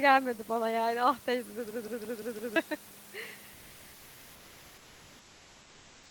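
From 1.71 to 2.56 s a system hang loop repeats one 171 ms slice five times, a 5.9 Hz machine-gun stutter. The exact repeats, which fit an 8192-sample buffer, mark it apart from fading concealment. Roughly a second of audio is lost.

From 3.53 s to the end, comfort noise replaces the room background, likely through discontinuous transmission. Steady, featureless hiss about 1 dB quieter stands in for real detail, rather than silence as a gate gives.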